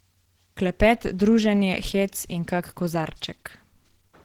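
Opus compression, likely the cause, runs through the whole clip: the speech sounds plainly hoarse, rough and grainy. This fits a low rate near 16 kbps in the codec's hybrid mode, which fills starved bands with noise, though content still reaches about 20.2 kHz.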